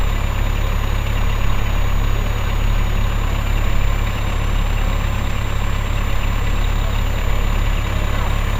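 From start to finish a switching supply whistle sits under the sounds: a thin, high tone near 7 kHz, roughly 30 dB below the main sound. A nearby switch-mode power supply is cycling at an audible rate, and its pitch wanders between about 6.85 and 7.31 kHz as its load shifts. On a spectrogram it shows as a faint horizontal line that drifts within that band across the whole clip. The waveform alone barely reveals it.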